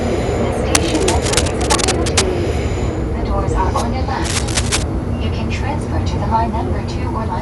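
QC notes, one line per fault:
Throughout: Dolby Digital compression, dull and band-limited with rough, fluttering noise around tones; likely a low-bitrate AC-3 encode, which fits about 64 kbps, starving many frequency lines.
0.75–2.2 s and 4.2–4.8 s: cable scratch noise, dense uneven scratching almost as loud as the sound itself; likely rapidly changing contact resistance in a worn connector.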